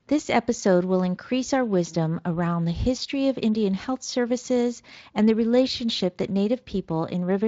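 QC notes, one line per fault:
No faults found; the speech comes through a Speex path at a setting that leaves only light coding texture, with nothing above 7.6 kHz.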